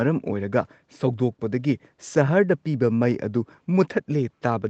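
There are no technical faults in this speech to describe in time order.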